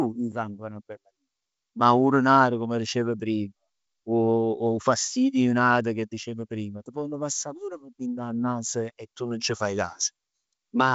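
Nothing here calls for comment, as the speech simply rides along on ordinary G.722 wideband telephone coding at 64 kbit/s with the faint upper-band hiss that path brings.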